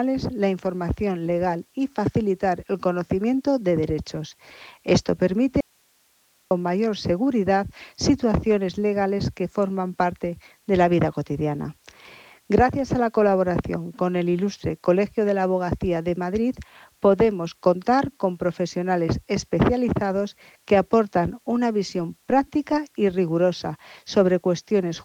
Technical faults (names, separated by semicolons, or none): audio dropout to a faint residue